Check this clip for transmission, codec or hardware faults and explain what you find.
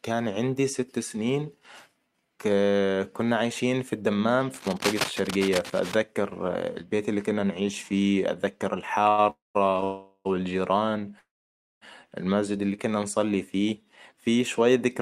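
The clip has three kinds of fault: cable scratch noise, a short stall from a late packet, and three call audio freezes.

From 4.50 to 5.95 s, cable scratch noise, likely from a worn connector whose contact resistance is fluctuating, lays dense, uneven scratching over the speech at about 5 dB below it.

At 9.09 s, just after "كنا نعيش فيه أتذكر", a short stall from a late packet: the jitter buffer ran dry, so the last sound is held for 86 ms before the speech resumes intact.

The call audio freezes follow the same pattern: packets were likely delayed in transit, the buffer emptied, and the last sound trails off as a fading buzz or hiss. Speech then resumes where it stopped, so the freezes insert gaps rather than removing anything. The first, from 9.30 to 9.57 s after "كنا نعيش فيه أتذكر", lasts 247 ms, including 170 ms of silence. The second, from 9.84 to 10.27 s, lasts 414 ms, with 40 ms of silence. 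The third, from 11.19 to 11.83 s, just before "المسجد اللي كنا نصلي", lasts 623 ms, 560 ms of it silent.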